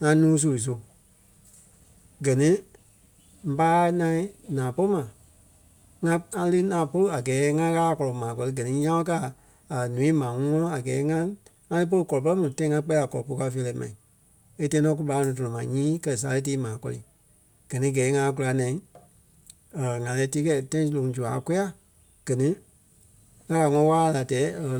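At 21.09 s the stream likely lost a tiny run of samples, dropped samples amounting to only a fraction of a millisecond. Because the samples on either side of the gap are joined directly, the waveform jumps abruptly from one value to a later one instead of moving smoothly. No part of the speech goes missing; the only trace is a single sharp click, which shows in a spectrogram as a thin vertical line spanning the frequency range.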